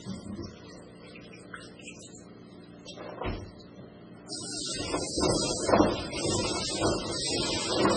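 Throughout the clip, the sound was likely squeezed through an MP3 encoder starved of bits, with heavy damage that fits a bitrate as low as 16 kbps. Short of bits, the encoder cut everything above 10.4 kHz and dropped weaker frequency lines, which flicker in and out from frame to frame. The result is dull, capped treble with a watery, swirling texture, metallic chirps on bright sounds, and smeared attacks across the whole recording.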